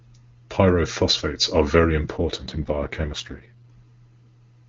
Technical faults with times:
2.18-3.70 AMR rate drop

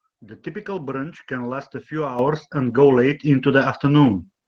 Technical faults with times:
2.19 microphone volume stepped up

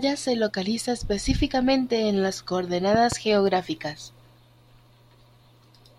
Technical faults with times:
2.94-3.14 loud pop

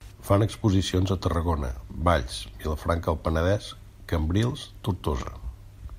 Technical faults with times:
5.21-5.29 loud pop

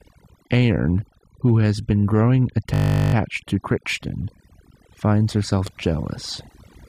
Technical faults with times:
0.00-6.88 overdone noise removal
2.74-3.14 system hang loop

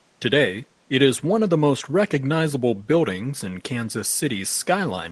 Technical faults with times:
none

